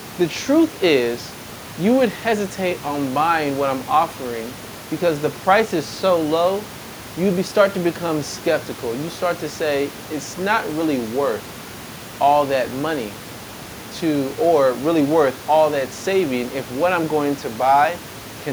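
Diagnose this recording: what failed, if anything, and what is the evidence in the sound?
Nothing in the signal chain has failed: the speech is continuous, with no dropouts, distortion or timing errors at any stage, and the only background is room noise sitting about 20 dB below the voice, which belongs to the recording space rather than the equipment.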